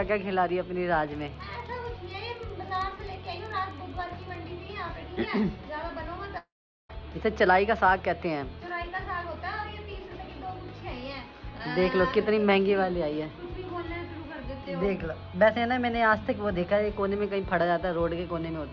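From 1.15 to 4.45 s a filter restarted on every block, losing its state each time, so a tick buzz at about 15.6 Hz follows the signal's level, which fits a 1024-sample block. At 6.38 s a likely long network dropout cuts the audio for about 0.52 s. A fading buzz gives way to silence, and the sound resumes at 6.91 s with that stretch missing. Throughout, the call path's G.722 coding leaves nothing above 8 kHz.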